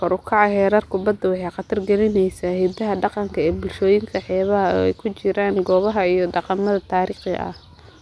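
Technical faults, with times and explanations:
No technical faults can be heard in this speech recording. There is nothing here that needs a time or an explanation.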